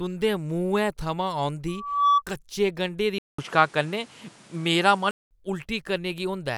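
At 1.68 s, right after "तुंʼदे मुहैं थमां", a loudspeaker feedback squeal kicks in. The mic is hearing the speaker it drives, and around 1.2 kHz the loop gain tips past one, so that tone feeds itself. It swells over a bit under half a second into a piercing whistle sitting roughly 10 dB above the speech, then cuts out at 2.22 s, just before "कच्चे गंढें".

Then at 3.18 s, after "कच्चे गंढें", you get a gap of about 200 ms and the sound comes back duller and narrower, with nothing above 11.8 kHz. The level shifts by a few dB, and a new noise floor creeps in, roughly 30 dB under the speech. That's likely an input switched to a poorer device mid-recording, a different mic or a headset profile with its own band and hiss. It holds until 5.31 s.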